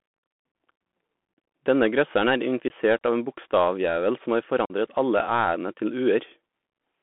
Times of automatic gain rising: none

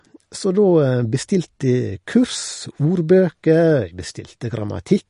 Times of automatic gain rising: none

